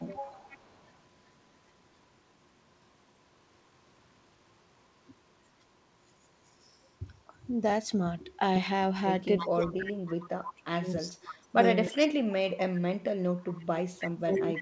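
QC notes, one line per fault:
0.09–0.23 s and 9.38–14.57 s, speech suppressed in double talk: the speech dips hard in both spots. The first is a short dip of roughly 20 dB lasting only a moment. The second is much worse, with the speech pushed down by up to about 35 dB in chunks across some four seconds, so it gets swallowed in pieces. The likely cause is the echo canceller treating both sides as echo while they overlapped and turning everything down.
0.48–0.91 s, 9.4–12.07 s and 13.54–14.61 s, echo leak: a delayed copy of the speech comes back 318 ms behind the original. The first bit is faint, about 25 dB down, but the later two sit only about 10 dB under the speech. It likely comes from one side playing the call on a loudspeaker and its canceller not scrubbing its own mic pickup. The G.722 band limit at 8 kHz applies to the echo as well.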